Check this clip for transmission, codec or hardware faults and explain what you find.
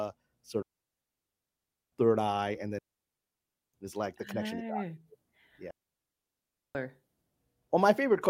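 The clip has three digital wireless dropouts, at 0.62 to 1.92 s, 2.79 to 3.74 s (ending just before "is like the") and 5.71 to 6.75 s. Each time the radio link lost too much data, so the receiver muted with a very fast fade. The speech drops into clean near-silence for 1.3 s, 0.95 s and 1.04 s, with no noise burst at either edge.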